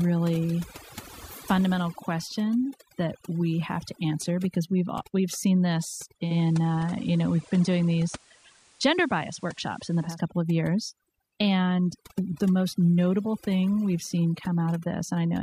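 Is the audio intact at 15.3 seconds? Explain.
No. Overdone noise removal runs through the whole clip, including 15.3 seconds: the noise reduction was pushed too hard, muting individual frequency bands near its noise estimate along with quiet speech detail. The background drops and breaks up into twinkling specks.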